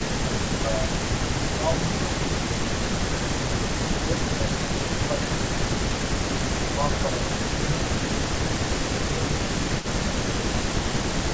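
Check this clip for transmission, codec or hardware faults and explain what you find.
Two problems show up here, both typical of a hands-free call where the echo canceller is struggling.

The speech ducks in and out in four spans: 0.22 to 2.3 s, 4.04 to 5.71 s, 6.63 to 9.15 s and 10.17 to 10.65 s. Level drops by about 10 dB at worst, a milder 5 dB in the last span, and the dips add up to well under a second each time. This is likely speech suppressed in double talk: with both ends talking at once, the canceller can't tell the local talker from loudspeaker echo, so it pulls everything down.

There's also a faint delayed copy of the voice, a short scrap at 6.94 to 7.07 s and a longer stretch from 8.46 to 10.04 s. It trails the original by about 290 ms and sits roughly 15 dB below it. That's likely echo leak: one side is on a loudspeaker, its canceller didn't fully remove what the microphone picked up, and the residue came back down the line, which is why it sounds like a quiet, late ghost behind the talker.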